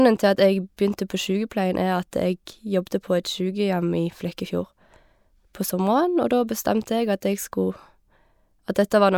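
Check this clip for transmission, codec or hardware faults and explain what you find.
No faults can be heard in this speech recording.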